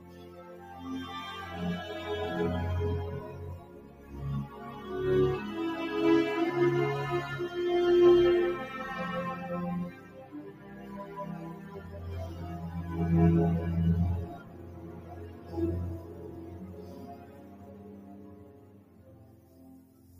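A noise suppressor built for speech stays active on this sound throughout, treating steady content as noise and swinging the level by roughly 15 dB. Unlike a compressor, it lets attacks through and sinks sustained parts. The sound cut by the noise suppressor sinks by about 7 dB at 0.0 to 0.7, 3.59 to 4.13, 9.91 to 11.15 and 11.45 to 11.94 s, and by about 8 dB at 14.34 to 15.54 and 15.98 to 20.16 s. These are level dips with shortened decays, not full dropouts.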